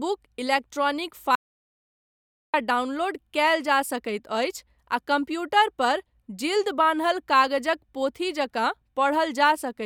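At 1.35 s the speech cuts off mid-flow into dead digital silence with no room tone beneath it, then resumes abruptly at 2.54 s, losing about 1.18 s. This audio dropout to silence likely came from the input briefly disconnecting while recording continued writing zeros.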